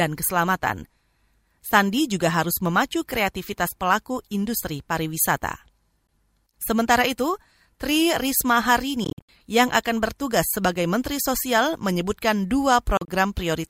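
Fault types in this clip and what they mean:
Bluetooth dropout: packets likely failed to reach the headphones in time and were discarded, so the speech drops to silence in brief holes, then resumes further on.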